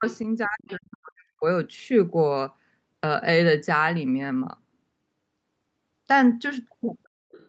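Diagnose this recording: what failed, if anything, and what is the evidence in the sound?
Speech suppressed in double talk, at the call-processing stage. At 0.0 to 0.04 s the level dips briefly by about 25 dB. From 0.46 to 1.44 s it dips again, for about a second, falling by up to about 40 dB. The likely cause is the echo canceller treating overlapping far-end and near-end speech as echo and attenuating both. On a waveform the envelope caves in across those spans. On a spectrogram the harmonics thin out and darken, with energy up to the 8 kHz ceiling collapsing.

The other side's voice leaking through, also at the call-processing stage. A faint second talker appears at 0.07 to 0.18 s and 0.68 to 0.75 s, about 25 dB below the main speech, and again from 7.31 s to the end, about 30 dB down. This is likely residual loudspeaker echo that the canceller failed to subtract from the microphone. 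A spectrogram would show a weak, separate harmonic pattern under or between the main talker's energy, and the waveform would show a low-level tail with no matching near-end onset.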